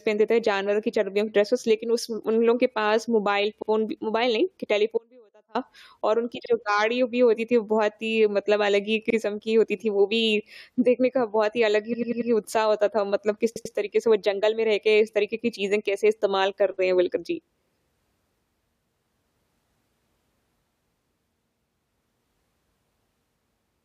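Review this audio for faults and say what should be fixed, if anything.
Short stutters occur at 3.61, 6.44, 9.09, 11.92 and 13.55 s. These are repeated frames: a run of compressed frames was decoded again. Blocks of 70 ms, 46 ms and 46 ms replay once. A 93 ms block at 11.92 s replays four times, adding 0.37 s. Another 93 ms block at 13.55 s replays twice. To prevent this, fix the writer or transport so each frame is sent once and duplicates are discarded by sequence number.

From 4.98 to 5.55 s the sound cuts off abruptly for about 0.57 s. Only a faint trace remains, about 35 dB below normal level, before it returns mid-flow. This is an audio dropout to a faint residue, likely a break in the signal feed while the path downstream stayed live. To prevent this, secure the source connection and buffer the capture path so the feed cannot drop out.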